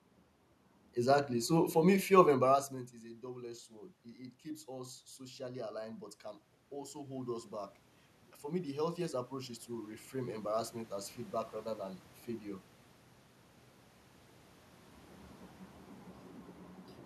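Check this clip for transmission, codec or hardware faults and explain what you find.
One system fault stands out: automatic gain rising. From 8.44 to 10.67 s, the gain control treats the input as too quiet and lifts the level by about 4 dB. The room noise swells along with the voice, which sets it apart from the talker moving around 2.5 and 14.5 s, where only the voice changes.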